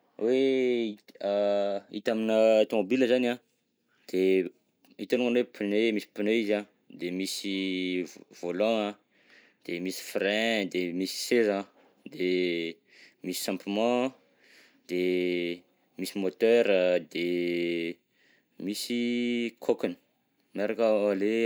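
No technical faults are audible.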